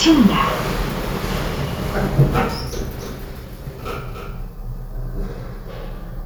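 From 2.99 s to 5.25 s every sound is followed by a dry, somewhat quieter second copy trailing about 300 ms behind, switching in and out abruptly. This doubled audio track is likely a second capture via a slower path mixed in.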